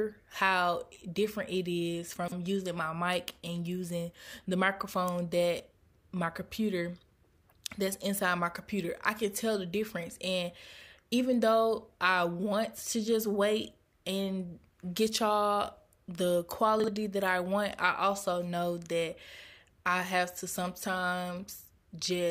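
At 2.16 to 2.32 s, between "how different it is" and "using my mic and", chunks play out of order: one 40 ms chunk arrives three chunks late, so the sound jumbles at three hard joins. At 16.8 to 16.88 s, after "and get y'all the", a single chunk is one place late. Unlike a dropout, no gap or missing sound occurs; the audio is all there, just briefly reshuffled.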